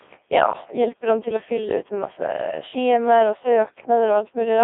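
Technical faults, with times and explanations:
throughout: Codec 2 vocoder. The speech sounds robotic and buzzy, confined to roughly 300 Hz to 3.6 kHz and heavily damaged, which fits a rate near 1.6 kbit/s. The decoder rebuilds the voice from sine waves using only pitch, voicing, energy and envelope, discarding the real waveform.
2.38 to 2.40 s: bit errors on digital voice radio. A brief warbling blip jumps out in pitch, level and tone colour, consistent with a single corrupted frame. A few percent of flipped bits landed where each bit steers that frame's synthesis parameters.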